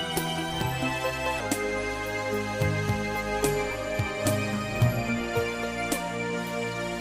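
From the start to 1.40 s, a section at the wrong speed plays back 1.25 times faster than it was recorded. Pitch rises with the tempo, by roughly four semitones. The sound turns high and hurried. At 1.40 s the speed and pitch drop back together. This is likely a playback or edit running on the wrong clock. Time and pitch are tied, so neither can shift without the other.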